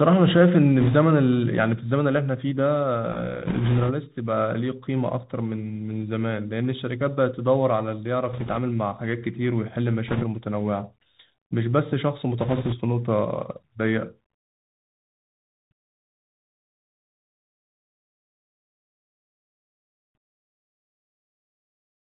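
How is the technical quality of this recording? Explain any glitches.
The speech has been carried over a narrowband Bluetooth headset link, and five short bursts of corruption break through it.

The Bluetooth CVSD headset codec shapes the whole clip. CVSD sends only one bit per sample, marking whether the waveform steps up or down, with a step size that adapts. The sound fits a 64 kbps CVSD link: nothing reaches above 4 kHz, s sounds come out scratchy, and a granular hiss sits beneath the speech. Unlike a simple low-pass or telephone filter, the damage moves with the signal. Loud, bright moments outrun the step size and roughen.

Bit errors on a Bluetooth voice link appear at 0.80–0.95 s, 3.46–3.91 s, 8.33–8.57 s, 10.08–10.23 s and 12.39–12.75 s. During these spans a few percent of the transmitted bits were flipped, and the burst at 10.08 s is the densest. Each CVSD bit carries the same small weight, and the decoder's errors fade out on their own, so the result is a rushing, crackly noise laid over the speech rather than sharp clicks or dropouts. 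That absence of loud pops or gaps is what separates it from packet loss.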